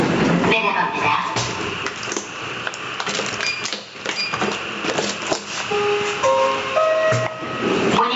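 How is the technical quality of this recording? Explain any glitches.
Gain pumping runs through the whole recording: loud and soft parts end up closer in level and the sound is squashed, swinging around 20 dB, likely from gain set far too high with a fast limiter clamping down.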